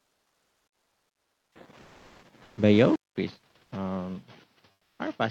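The gaps from 0.00 to 1.55 s, 1.81 to 2.21 s and 2.43 to 2.57 s sound like comfort noise in place of the background: a flat, featureless hiss where the real room sound should be, about 7 dB and 5 dB quieter in the first and third. The likely cause is Opus DTX muting the sender and the receiver faking the background. At 2.96 s there's a 200 ms dropout, then the sound goes dull, with nothing above 6.4 kHz, about 5 dB quieter and with a new noise floor roughly 35 dB down. That's likely an input switched to a poorer device. The same comfort noise fills 4.71 to 4.99 s, about 6 dB down.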